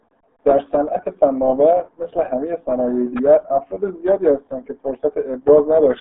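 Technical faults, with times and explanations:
Throughout, RealAudio 14.4 codec: the speech sounds muffled, boxed-in and gargly, with nothing above 3.8 kHz and the band held to roughly 200 Hz to 3.6 kHz. The coding damage is heavy, which fits an 8 kbit/s RealAudio 1 speech codec built for dial-up modems.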